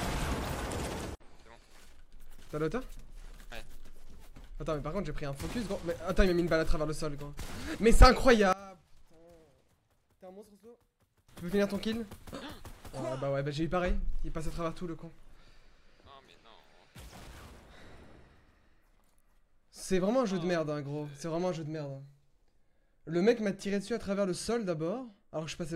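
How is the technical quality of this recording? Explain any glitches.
One glitch stands out. From 8.53 to 11.29 s the sound collapses to a faint remnant, about 22 dB quieter, then returns at full level. The likely cause is one channel inverted: with one stereo side flipped in polarity, whatever both channels share cancels when summed to mono, leaving only their difference. That residue is what betrays it. A plain dropout would go silent, and a gain dip would keep the same tone, but here the shared content vanishes, leaving only a faint copy of the mismatch between the channels.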